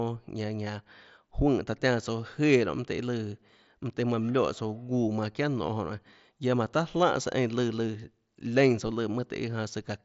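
No technical faults are audible.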